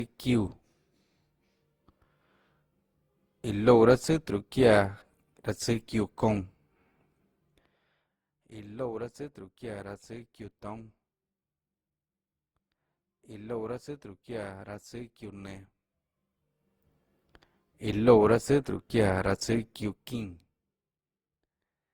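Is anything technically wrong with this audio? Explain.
Yes. Throughout the speech, generation loss is audible: it sounds swirly, hollow and smeared, with blurred consonant onsets. This likely comes from about fifteen re-encodings, fitting a 64 kbit/s Opus chain, each pass adding fresh quantisation on a shifted frame grid. A spectrogram shows nothing above 20.4 kHz.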